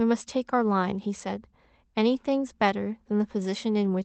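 Speech heard through a call path, its top end stopping at about 8 kHz as a band-limited call codec such as Opus would leave it, with no technical fault to report.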